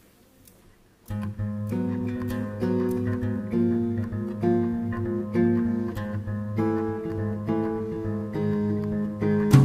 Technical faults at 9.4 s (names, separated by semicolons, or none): none